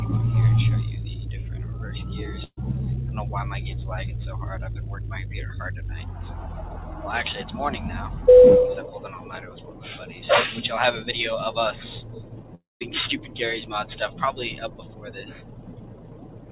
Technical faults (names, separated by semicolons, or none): burst of packet loss; long network dropout